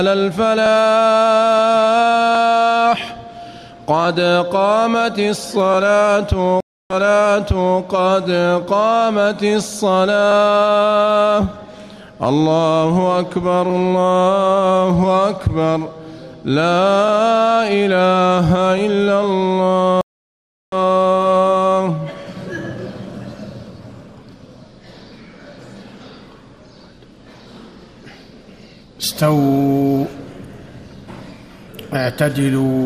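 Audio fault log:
6.60–7.79 s, stream reconnect: the connection dropped and a fresh decoder restarted mid-stream, leaving 0.3 s of silence before playback resumes 0.89 s earlier, repeating sound. The waveform shows a flat gap with a fade-in; the spectrogram shows a blank column.
20.01–20.75 s, stream reconnect: a 0.71 s dropout, then the restarted decoder picks up roughly 0.7 s later, skipping sound. It appears as an empty band with a fade-in.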